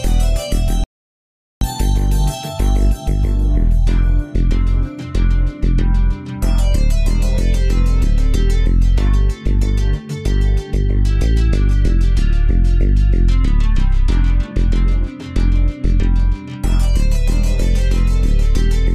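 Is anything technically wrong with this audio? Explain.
Yes. From 0.84 s to 1.61 s there is an audio dropout to silence: the sound cuts off abruptly mid-flow and returns just as abruptly about 0.77 s later. The likely cause is a lost input, such as a device disconnecting, a link failing or a brief mute, while recording carried on writing zeros. Unlike a quiet passage or a gated pause, the gap holds no room tone or noise floor at all, only dead digital silence, and whatever sounded during it is gone.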